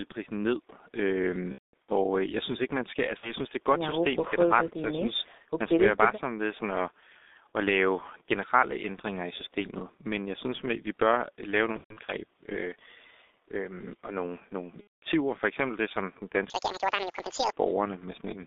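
A speech recording that sounds heavily muffled and hoarse throughout, with smeared consonants and nothing above about 3.7 kHz or below about 250 Hz. This is the G.723.1 codec, whose coarse 30 ms frames and slow-moving voice model, at a rate consistent with about 6.3 kbit/s, strip detail from every syllable. VoIP packet loss concealed by the speech codec shows up as stretched, buzzy or noisy fills that fade out at 1.52–1.94 s (about 270 ms missing across 360 ms, longest gap 210 ms), 3.17–3.33 s (60 ms), 11.73–12.14 s (210 ms across 360 ms, longest gap 120 ms) and 14.81–15.04 s (210 ms). In the longer gaps the decoder goes silent once the loss runs past two frames, and because each frame depends on the previous one, the speech stays weak after the stream resumes. From 16.50 to 17.52 s the speech turns high and hurried, running at 1.91 times normal speed and almost an octave up in pitch. This section is at the wrong speed, likely from playback against a mismatched clock.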